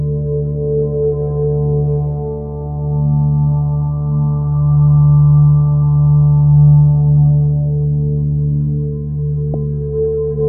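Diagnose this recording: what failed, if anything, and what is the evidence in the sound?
Damaged data in a compressed stream broke decoding: the decoder lost frame sync and searched for the next header, disrupting the audio from 9.51 to 9.55 s.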